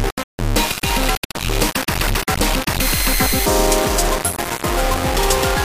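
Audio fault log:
Throughout, low bit depth without dither: the audio was likely rounded to a 3-bit word with no dither, leaving only a handful of amplitude steps. Because the rounding error tracks the waveform rather than spreading as smooth hiss, it turns into a harsh, grainy distortion that shifts with every change in the sound, sitting nearly as loud as the signal itself. Quiet stretches collapse to silence or sputter as they flip between adjacent steps.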